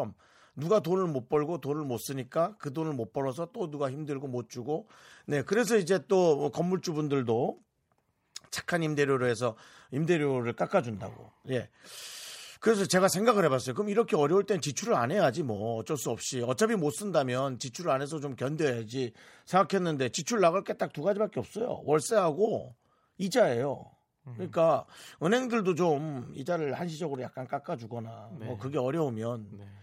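No technical faults are audible.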